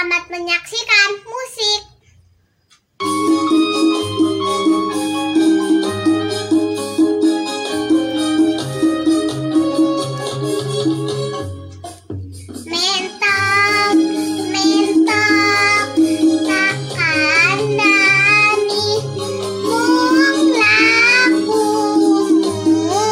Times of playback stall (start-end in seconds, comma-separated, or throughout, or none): none